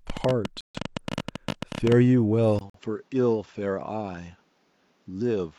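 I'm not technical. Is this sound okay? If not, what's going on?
No, it has a few problems. From 0.10 to 1.93 s there's a train of clicks: about 30 quick ticks, roughly 15 a second at an uneven pace, sitting on top of the speech. That's likely interference from nearby gear or a faulty connection or power supply.

There are also two cases of corrupt frame muted. Damaged chunks of the compressed file got thrown out by the player and replaced with silence, so you hear sudden holes, one from 0.61 to 0.80 s and a shorter one from 2.70 to 2.79 s.

Then at 2.59 s, right after a tiny 20 ms gap, the sound turns duller and a bit quieter for the rest of the clip, with nothing above 7.6 kHz. That's an input switched to a poorer device, most likely a different microphone or a headset taking over partway through.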